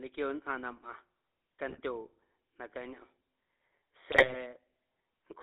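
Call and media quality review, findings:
GSM full-rate codec, whole clip: buzzy, gravelly roughness on the speech, band squeezed to about 300 Hz to 3.7 kHz, codec damage plainly audible. Fits the 13 kbit/s full-rate coder: vocal-tract filter driven by a sparse pulse excitation (every third sample kept), so the fine texture collapses into buzz. Nothing up top to soften it.

GSM bit errors, 1.70 to 1.80 s: short squawk and pop, spectrum bent for a blink. Flipped bits reaching the GSM decoder, hitting filter, pitch or gain values across a handful of frames. Heavier error density here.

GSM bit errors, 4.12 to 4.37 s: longer gargly smear. Same decoder corruption, lighter error rate spread over more frames.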